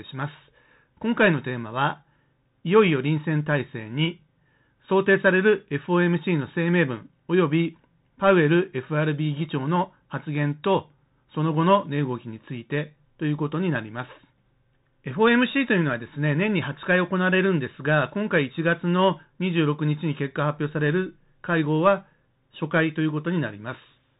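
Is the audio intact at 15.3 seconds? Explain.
No. At 15.3 s, as throughout the speech, the Bluetooth CVSD headset codec is in effect: one-bit up/down coding with an adaptive step, consistent with a 64 kbps stream. Nothing passes above 3.8 kHz, sibilants sound scratchy, and a granular hiss sits underneath.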